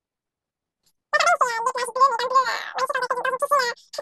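Speech that runs way too fast and sits far too high from start to finish, a classic wrong sample rate. Everything is about 2.76 times quicker and roughly 17.6 semitones up, which fits 16 kHz audio being played at 44.1 kHz without conversion.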